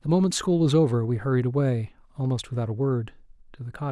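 No technical faults can be heard anywhere in this speech recording. There is nothing here to place in time or trace to a cause.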